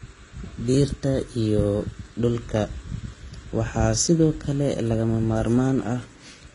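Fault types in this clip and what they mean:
Transcoding between lossy codecs: throughout the speech, two different kinds of coding artefacts sit on top of each other, and nothing is heard above 10.6 kHz. This points to a low-bitrate HE-AAC encode, likely re-encoded as Vorbis. A single codec would leave only one kind of artefact.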